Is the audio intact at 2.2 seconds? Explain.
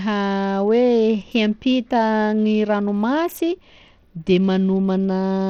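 No, 2.2 seconds sits within Bluetooth SBC compression that runs through the whole speech clip; starved upper sub-bands make the treble flicker with gritty aliasing, not a clean low-pass cut, likely from an 80 kbps link.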